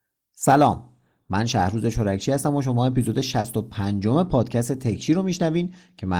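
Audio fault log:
3.40–3.45 s, short concealed packet loss: about 40 ms of the call didn't reach the decoder in time, so the receiver covered the gap by stretching out the speech just before it and then blending back, which leaves a quick smear right there.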